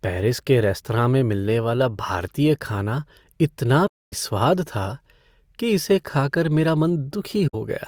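A speech clip with two soft dropouts from AAC frame loss with muting. The first runs from 3.87 to 4.13 s, right after "वाला भारतीय खाना इतना". About 256 ms goes silent there. The second is shorter, from 7.47 to 7.55 s, about 64 ms. In each case the decoder zeroed the missing spectrum. The overlapping windows then faded the sound down and back up. That leaves smooth-edged holes.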